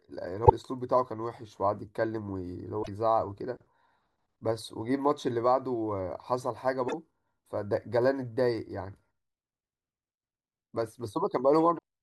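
Damaged data in the compressed stream at 0.45–0.51 s, 2.80–2.89 s, 6.85–6.94 s and 11.75–11.79 s. Each time the decoder loses sync on corrupt frames and produces a brief chirp, squawk, click or short hole in the speech.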